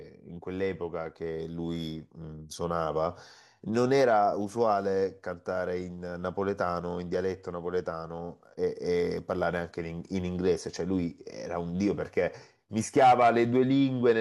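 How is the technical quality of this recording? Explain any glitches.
No glitches or technical faults can be heard anywhere here.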